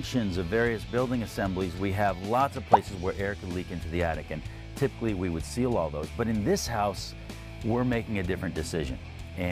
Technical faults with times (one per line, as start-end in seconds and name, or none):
none